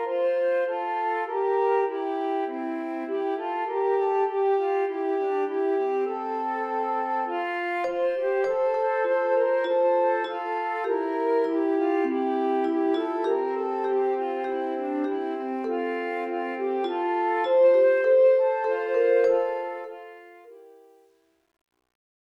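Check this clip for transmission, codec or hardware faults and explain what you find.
There's one fault here: truncation distortion on the fade-out at the end. From 19.36 s the level eases down smoothly, reaching the end at 22.3 s, but the gain stage isn't keeping enough resolution and isn't dithering. The grit fits something like 10-bit precision. As the signal shrinks toward the smallest step, the waveform collapses into coarse staircases. It's worst from 20.24 s to 22.34 s, where the tail turns grainy.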